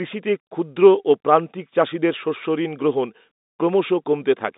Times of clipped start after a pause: none

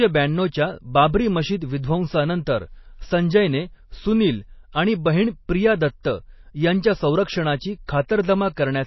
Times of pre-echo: 6.03, 7.87-8.09

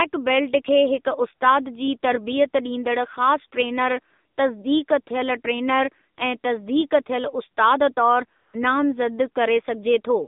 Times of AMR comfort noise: 4.36, 8.40-8.54

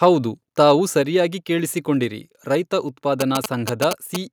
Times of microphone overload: 0.03-0.05

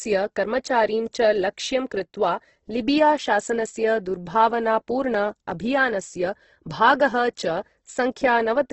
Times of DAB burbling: none

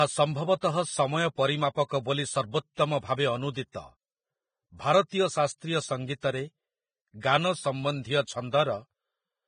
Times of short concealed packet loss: none

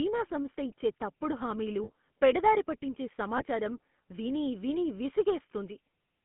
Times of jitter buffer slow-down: none

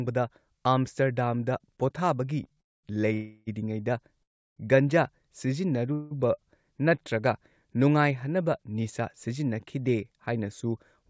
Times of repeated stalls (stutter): 2.44-2.59

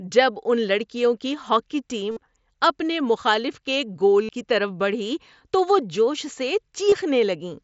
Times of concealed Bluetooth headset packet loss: 2.11-2.17, 4.23-4.29, 6.90-6.92

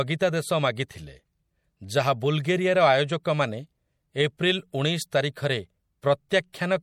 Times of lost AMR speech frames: none

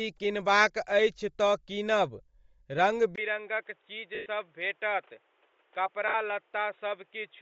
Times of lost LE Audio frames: 4.15-4.26, 6.08-6.14

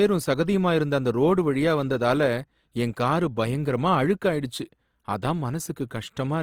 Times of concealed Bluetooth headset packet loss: none

